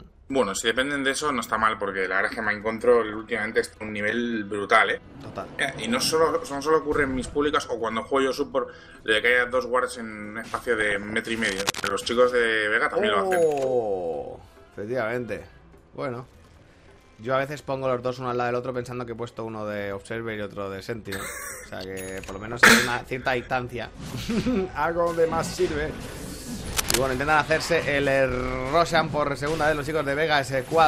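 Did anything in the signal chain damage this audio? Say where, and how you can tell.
Yes. DAB burbling appears at 3.04–3.89 s, 10.79–11.19 s and 22.36–22.73 s. This is reception and codec damage: bit errors slipped past error correction into the MP2 data. The result is short noise blips in individual sub-bands and sub-bands jumping in level, giving a watery, bubbling texture. The last two patches point to a higher error rate than the first.

At 11.43–11.88 s and 26.73–27.02 s, bursts of dense, uneven scratching noise sit over the sound, about 5 dB below the signal and then at about signal level. This is cable scratch noise in the analogue wiring, likely from a worn cable, connector or control carrying DC being moved, its contact resistance changing rapidly.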